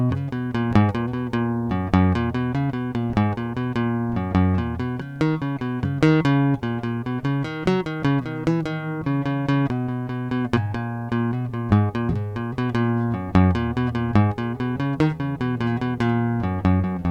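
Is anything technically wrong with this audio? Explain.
No, no technical faults.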